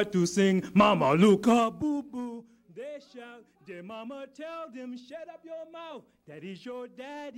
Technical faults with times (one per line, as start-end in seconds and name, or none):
1.42-2.38 zipper noise